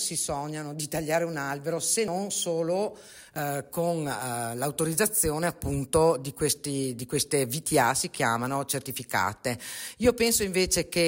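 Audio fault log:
2.08 s and 3.36 s, dropped buffer (overrun): the sound jumps abruptly at each point, with no gap of silence. The first jump skips roughly 70 ms, the second only about 20 ms. The likely cause is the recording program failing to collect its samples before the hardware overwrote them. The lost stretch vanishes, and the audio on either side is butted together.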